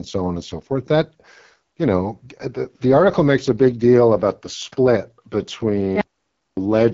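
AMR wideband (HD Voice) codec damage runs through the whole of this speech clip: the voice is rough and raspy, with nothing above about 7.4 kHz, and the coarse pulse modelling of the vocal tract and noise-filled top band point to one of the lowest modes, around 8.85 kbit/s. An audio dropout to silence hits from 6.01 to 6.57 s, cutting the voice off mid-flow for 0.56 s of silence with no room tone before it resumes, most likely because the input link or device briefly failed while recording continued.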